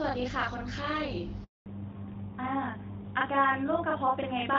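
From start to finish, a channel delay (doubling) puts a second copy of the speech about 40 ms behind the first. One channel arrives late and the two are summed to mono. At that spacing the copy is heard as a distinct doubling rather than the hollow comb-filter colour of a very short offset.

At 1.44 s a handover gap cuts in as the call moves between networks and no speech frames arrive. The sound fades out within a few tens of milliseconds and stays silent for 220 ms, until 1.66 s. It is a clean hole, not the buzzy or repeated fill of packet-loss concealment.

From 1.66 s to the end there is a fallback to narrowband. The first part of the clip carries clear HD Voice, which fits AMR-WB at around 12.65 kbit/s. After the new link comes up, nothing above 4 kHz remains, which points to AMR-NB at 12.2 kbit/s. The speech turns duller and rougher. The loss starts exactly where the gap ends, so it is a codec switch and not a gradual filter or EQ change.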